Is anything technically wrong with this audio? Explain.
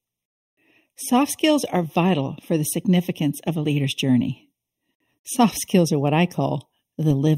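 Yes. Channel delay (comb filtering) runs throughout: one channel lags about a third of a millisecond, so summing cancels evenly spaced frequencies, the first around 1.5 kHz, leaving the speech hollow.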